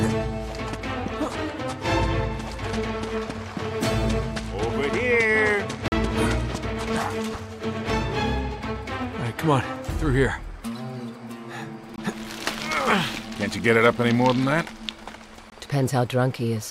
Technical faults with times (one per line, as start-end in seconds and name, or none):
5.88-5.92 block of digital silence
11.96 block of digital silence
15.50 block of digital silence